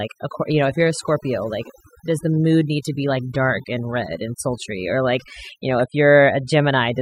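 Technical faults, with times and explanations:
Throughout: overdone noise removal. Noise reduction set too strong pulls frequency bands near its noise estimate far down, taking quiet speech detail with them, so the background drops and breaks up into twinkling specks. On a spectrogram, scattered isolated dots sit in otherwise blank gaps.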